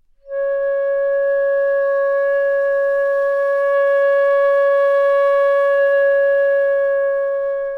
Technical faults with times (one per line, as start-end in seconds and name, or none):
none